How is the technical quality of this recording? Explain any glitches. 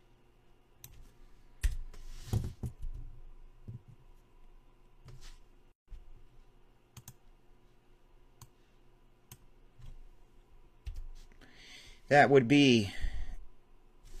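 There's one real glitch, a gap at a join of encoded pieces: from 5.72 to 5.88 s, about 159 ms of silence slices in with smeared edges. Separately encoded chunks were likely stitched together untrimmed, leaving encoder delay and padding in before the sound resumes.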